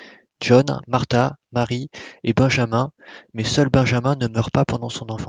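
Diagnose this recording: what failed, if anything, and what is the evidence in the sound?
Nothing failed here: listening to the speech, no stage in the chain leaves any audible mark, so there's no fault to diagnose.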